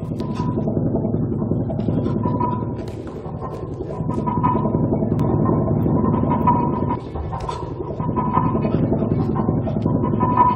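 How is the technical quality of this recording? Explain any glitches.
There's one clear glitch. From 5.20 to 6.96 s you get a doubled audio track: a second copy about as loud, roughly half a second behind, cutting in and out abruptly, likely from a slower duplicate capture path.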